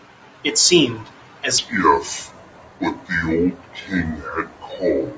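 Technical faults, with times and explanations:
1.58 s to the end, wrong sample rate: the speech suddenly drops to two-thirds speed and about 7 semitones lower, which fits 24 kHz audio played at 16 kHz. Unlike a pitch shift or time-stretch, speed and pitch fall together by exactly the same ratio.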